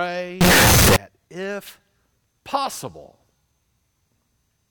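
From 0.41 to 0.96 s the speech turns loud and harsh, squared off at a nearly fixed, high level, with background noise as loud as the voice, though pitch remains traceable. The likely cause is float read as integer: 32-bit float samples interpreted as 32-bit integers.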